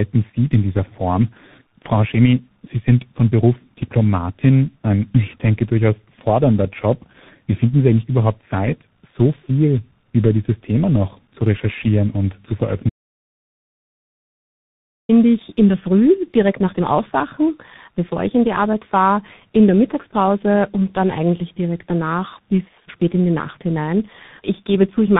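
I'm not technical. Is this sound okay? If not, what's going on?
No, not quite. The speech has tandem speech coding: it passed through two phone-style speech coders in a row, so it sounds muffled, rough and a bit warbly, with nothing above 3.8 kHz. There's also an audio dropout to silence from 12.90 to 15.09 s. Right after "zu recherchieren und zu" everything goes dead silent for about 2.2 seconds until "ich in der", likely from a lost connection.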